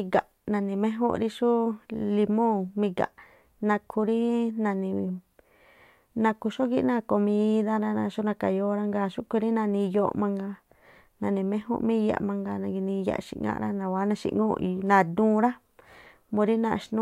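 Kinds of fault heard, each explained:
No kinds of fault are heard in this speech clip.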